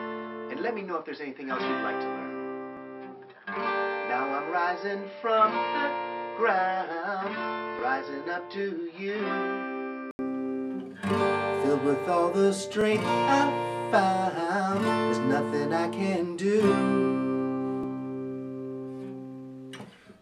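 From 0 to 10.19 s the sound is dull and slightly quieter, with nothing above 5.5 kHz and a faint noise floor. At 10.19 s an 80 ms gap leads into fuller sound, likely an input switched to a poorer device and then back. The spectrogram shows a flat ceiling at 5.5 kHz, and the waveform shows a blank stretch at the switch.

Overlapping chunks, with about 21 ms replayed at each 5-second join, produce clicking stutters at 2.77, 7.79, 12.81 and 17.83 s. These appear as tiny repeated waveform slivers with vertical spectrogram lines.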